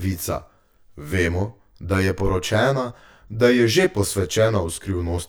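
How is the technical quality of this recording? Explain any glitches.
The recording has one fault, present for its whole length: channel delay (comb filtering). One channel reaches the mono mix roughly 20 ms behind the other, so shared content cancels at evenly spaced frequencies from around 30 Hz upward. The long delay makes the speech sound rough and slightly doubled.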